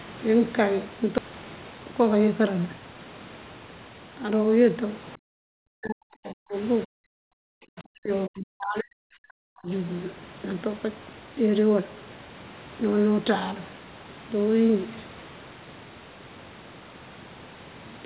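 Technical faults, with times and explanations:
1.18 to 1.2 s, skip ahead: playback jumps forward with essentially no gap. Roughly a second of audio is simply gone, and the two sides of the cut are butted straight together. That pattern points to a chunk being thrown away while later audio was already queued, either lost in transit or dumped by the jitter buffer when it overflowed. The listening delay drops by about a second in one go, which is why nothing is filled in.
1.28 to 2.95 s, jitter buffer speed-up: right after the jump the sound rushes along at about 112% speed, but the pitch stays put. The buffer was still holding more audio than it wanted, so the receiver kept snipping out tiny pitch-period-sized slices, one after another, to catch up. Altogether something like 200 ms gets trimmed across that stretch. The result sounds hurried rather than chipmunky, since pitch isn't touched.
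5.17 to 6.56 s and 6.86 to 9.71 s, speech suppressed in double talk: in both spans the level sags hard, at its deepest down around 40 dB, affecting about 1.5 s of the first span and about 3 s of the second. The likely cause is the far end talking at the same time. The echo canceller couldn't tell this talker apart from its loudspeaker echo, so it clamped down on everything. All of this sits on top of the G.711 line's usual 4 kHz ceiling.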